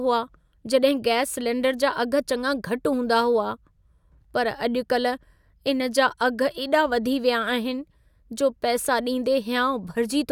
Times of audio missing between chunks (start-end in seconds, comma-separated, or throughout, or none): none